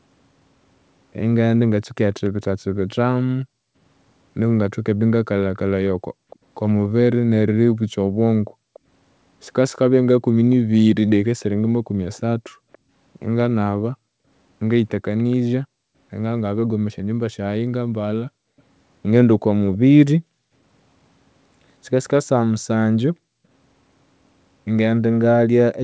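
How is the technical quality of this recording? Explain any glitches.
The recording has two call-processing faults: a faint delayed echo of the speech and repeated dips in the background. Like the rest of the speech, both are band-limited with nothing above 8 kHz, which fits a wideband call codec such as G.722.

Echo leak, 2.24 to 15.36 s and again 18.59 to 19.78 s. A quiet copy of the speech trails the original by about 287 ms in the first stretch and about 308 ms in the second, sitting roughly 30 dB below it. This is likely loudspeaker sound at the far end that reached the microphone and slipped past the echo canceller. The copy comes back as a faint repeat just behind the speech.

Background gated by the echo canceller, 3.44 to 8.74 s and 11.82 to 23.45 s. While the other side's audio was playing, the canceller clamped the microphone down, cutting the room sound by up to about 40 dB. 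The drops add up to roughly a second in the first span and about two seconds in the second. The ambience audibly vanishes and then snaps back when the suppression releases.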